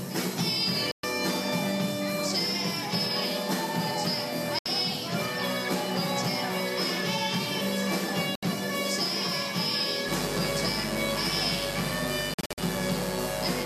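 Digital broadcast dropouts at 0.91–1.04 s, 4.59–4.66 s and 8.35–8.43 s: the receiver lost valid frames and muted, leaving holes of about 120, 72 and 72 ms before the sound resumes further on.

Mains buzz from 10.05 s to the end: sharp switching spikes on a 50 Hz supply add a steady, raspy buzz rich in harmonics, sitting roughly 10 dB below the sound.

A further digital broadcast dropout spans 12.34–12.58 s. Here the muting breaks up into several short holes scattered over about 240 ms, the longest about 48 ms, with around 170 ms of sound lost in total.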